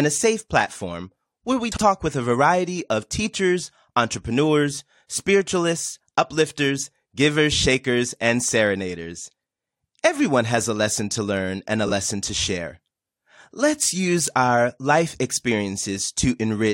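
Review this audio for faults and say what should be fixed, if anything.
Frames out of order occur twice. From 1.72 to 1.82 s, two adjacent blocks of about 46 ms each play swapped, which fits two-frame runs. At 11.86 to 11.91 s, two blocks of about 23 ms each, consistent with single frames, are exchanged. Each gives a brief garbled flutter. On a waveform, the envelope steps abruptly at each join; a spectrogram shows harmonic tracks jumping out of sequence there. Prevent it by ordering frames by sequence number in the jitter buffer before decoding.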